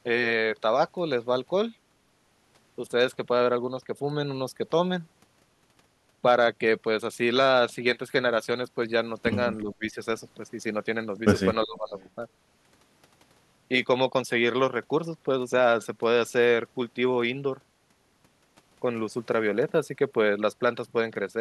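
A speech recording with two problems. Speech suppressed in double talk occurs from 9.63 to 9.97 s and from 11.65 to 11.94 s. The voice drops by around 25 dB, likely because the echo canceller mistook overlapping talk for echo. An echo leak follows from 11.97 to 12.11 s. A faint copy of the voice returns about 0.36 s late, roughly 30 dB down. This is likely residual loudspeaker echo the canceller failed to remove.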